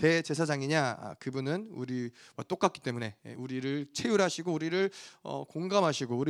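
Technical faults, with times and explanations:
No technical faults can be heard in this speech.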